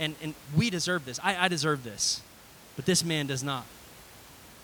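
There are no technical faults in this speech to describe, at any point in time.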